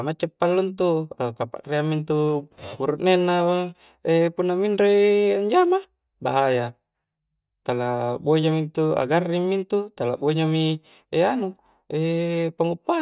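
Nothing stood out on listening to this speech recording.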